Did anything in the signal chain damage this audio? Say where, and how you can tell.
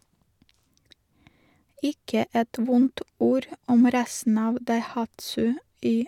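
No, nothing along the chain seems to have harmed this speech recording, so there's no stage to point a finger at.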